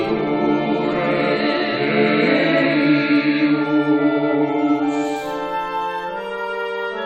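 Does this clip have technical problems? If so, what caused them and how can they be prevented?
No, there are no technical problems to report.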